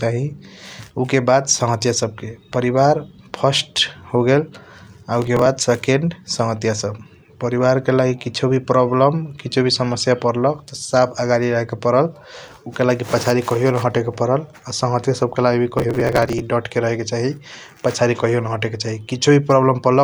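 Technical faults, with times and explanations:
5.22–5.46 s and 15.78–16.42 s, processor overload crackle: two bursts of gritty tearing run through the speech, the second longer and ending just before "डट रहेके चाही पसादी". The processor fell behind on very short buffers, around a millisecond and a half each, and skipped them. Each skip left a tiny hard-edged gap. The dense run of clicks, rather than one clean dropout, sets this apart, pointing to about ten and then several dozen misses in a row.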